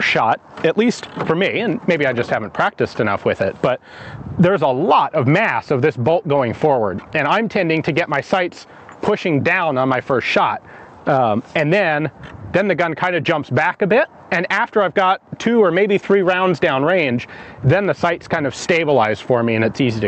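Gain pumping runs through the whole clip: the level swings by around 10 dB, with loud and soft parts pulled closer together, so everything feels squashed. That's likely input gain set way too hot, with a fast limiter clamping down every time. The highs topping out near 8 kHz come from the call path.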